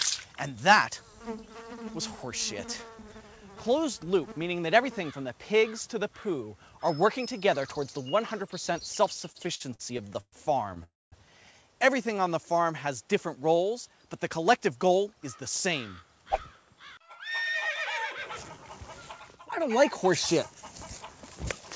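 Audio carried over a call link, band-limited to nothing above 8 kHz, which fits a G.722 wideband codec, shows three network faults. From 9.32 to 10.34 s, packets kept arriving late, so the jitter buffer ran dry 11 times. Each time the receiver stretched the last sound to cover the gap, with the longest fill at 120 ms. The result is repeated stalls (stutter): about a third of that second is concealment, and the sound drags and stutters. From 10.84 to 11.14 s a call audio freeze inserts 283 ms of held-over sound that fades, about 210 ms of it silent, before the audio resumes where it stopped. It is likely caused by packets delayed in transit emptying the buffer. From 14.29 to 15.09 s a jitter buffer speed-up drains excess buffered delay by cutting short pitch-period pieces, about a tenth of a second in total, so the audio runs at 110% speed with unchanged pitch and sounds hurried.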